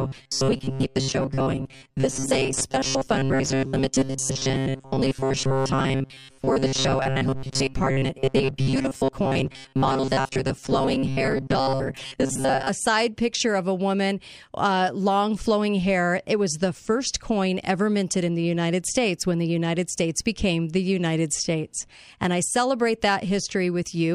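From 0.01 s to 12.69 s, ending just before "side picture of a", the speech has robotic sound from repeated short buffers: a rigid, metallic buzz fixed at 134 Hz, likely from a roughly 7.5 ms chunk replayed for most of that stretch. Unlike a flanger's sweep, this pitch never moves.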